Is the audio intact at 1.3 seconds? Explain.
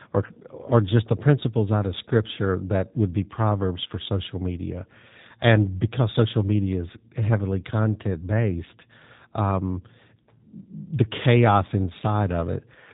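No. At 1.3 seconds the speech carries G.729 codec damage, which runs through the entire clip rather than starting at that moment. The codec models each 10 ms frame as a vocal tract filter, a pitch predictor and a small set of pulses, so the waveform is resynthesised rather than reproduced. The result is plainly audible roughness and a synthetic quality, with nothing above 3.8 kHz. This fits the 8 kbit/s G.729A variant.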